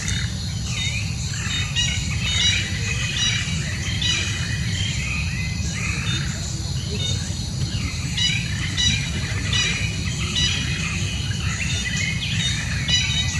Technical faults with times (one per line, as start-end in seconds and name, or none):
2.26 block of digital silence